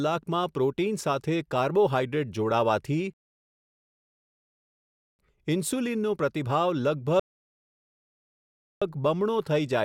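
At 3.14 s the speech halts in a rebuffering stall: playback ran out of downloaded audio and waited, holding silence until 5.19 s and adding about 2.06 s. A second stall follows from 7.20 to 8.82 s, adding 1.62 s. Unlike a dropout or packet loss, where a chunk vanishes, the speech picks up exactly where it stopped, so nothing is lost and only time is added.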